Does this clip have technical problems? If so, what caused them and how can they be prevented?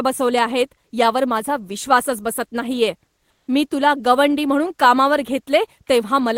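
Yes. From 3.30 to 3.47 s, between "माझा विश्वासच बसत नाहीये" and "मी तुला गवंडी म्हणून", comfort noise replaces the real background for 170 ms. It sounds flat and featureless, about 7 dB quieter. The likely cause is discontinuous transmission, which points to Opus DTX. The sender's voice detector paused sending, and the receiver filled the gap with synthetic noise. Disabling DTX, or setting the voice detector less aggressively, prevents it.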